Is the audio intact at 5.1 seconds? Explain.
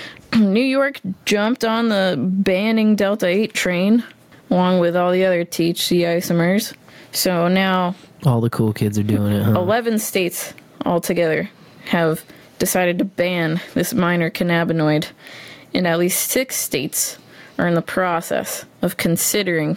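No. Gain pumping runs throughout, including 5.1 s: the gain swings by roughly 15 dB as it is pulled down on each loud sound, squashing loud and soft parts closer in level, likely from excessive gain feeding a fast limiter.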